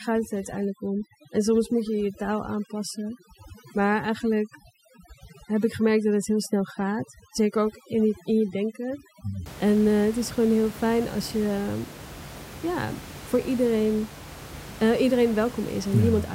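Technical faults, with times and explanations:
0.0 to 9.46 s, overdone noise removal: a noise reducer set too strong shuts off bands near its noise estimate, turning background down and breaking it into twinkling specks; unlike codec warble, the room noise returns after 9.46 s.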